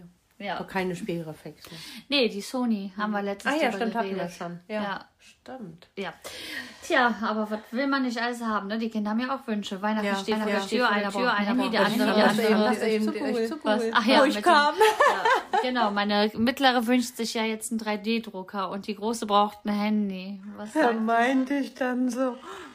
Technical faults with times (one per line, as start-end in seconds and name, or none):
10.32-14.26 doubled audio track
19.34-22.74 time-stretched section